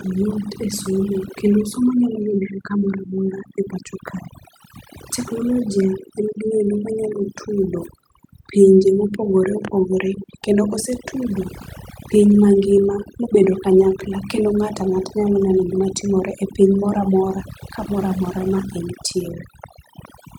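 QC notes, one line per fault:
throughout, overdone noise removal: the background drops and breaks up into twinkling specks. A noise reduction stage set too strong cuts individual frequency bands whenever they sit near its noise estimate, taking quieter parts of the speech along with the noise.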